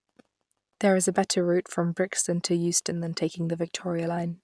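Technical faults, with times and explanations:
No technical faults are present in the speech recording.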